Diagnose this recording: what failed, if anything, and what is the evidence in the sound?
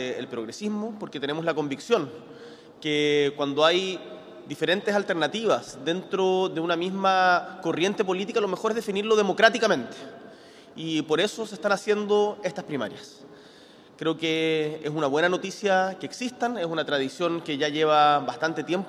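Nothing in the chain failed: no stage, from the analogue wiring through conversion and coding to playback, leaves any audible trace of a fault anywhere in the recording.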